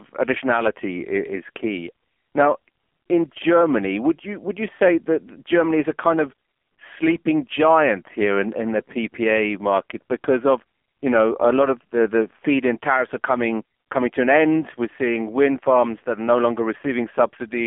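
From start to finish, the speech carries heavy AMR narrowband mobile codec damage. Nothing passes above 3.5 kHz or below about 250 Hz. Each 20 ms frame is rebuilt from a vocal-tract model and sparse pulses, giving a buzzy, synthetic voice consistent with a low 5.9 kbps mode.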